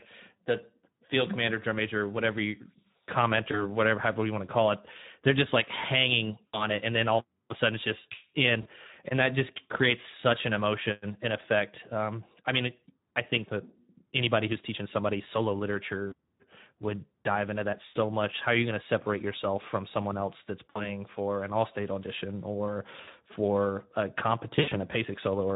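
Throughout the speech, Speex codec damage is plainly audible. The coarse sound fits a Speex mode around 11 kbps. At that rate the CELP encoder has too few bits to model the excitation, so the voice sounds hoarse and noisy. Any content above 4 kHz is only a shaped hiss rather than real detail.

VoIP packet loss concealed by the speech codec then breaks in at 3.51–3.65 s, 6.49–6.66 s (right after "they're just like hanging"), 8.61–8.67 s, 16.07–16.14 s, 17.85–17.97 s, 20.69–20.88 s (between "from someone else that's" and "for an all state"), 23.01–23.12 s (between "all state audition or" and "for a") and 24.55–24.78 s. The missing audio runs from 20 ms to 120 ms per event. In the last event it is scattered over 160 ms, with the longest run 80 ms. During each dropout the decoder repeats its last pitch and filter at falling gain, which produces a fading buzzy tone or coloured noise. The voice then stays weak or distorted briefly after the signal returns.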